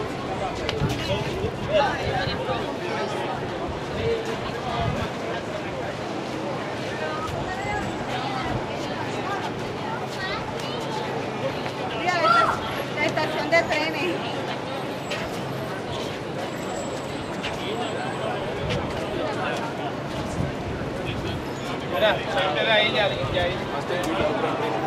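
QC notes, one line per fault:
No faults to note.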